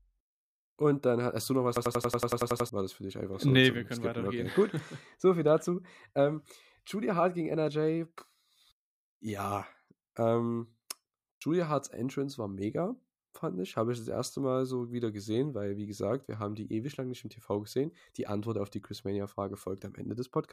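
From 1.77 to 2.69 s the speech locks into a system hang loop, one 92.9 ms chunk repeating at 10.8 Hz, a machine-gun stutter that fits a 4096-sample buffer.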